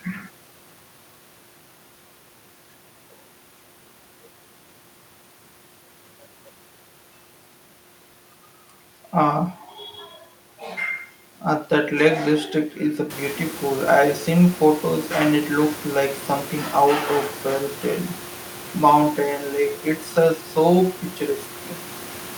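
Nothing stood out on listening; the room's background noise rises at around 13 s and stays roughly 18 dB below the speech, which is part of the recording itself.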